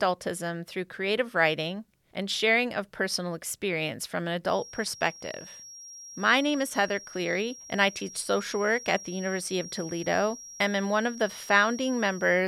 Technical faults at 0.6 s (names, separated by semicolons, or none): none